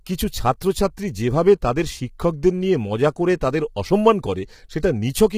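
A speech recording carries heavy coding damage from start to finish: the voice sounds rough and grainy, with a hiss-like texture filling the gaps between the pitch harmonics and a dull or artificial-sounding top band. This is likely low-delay AAC compression of the AAC-ELD type used for video calls, whose short frames cannot separate closely spaced harmonics well, and the degree of damage fits a bitrate around 24 kbps.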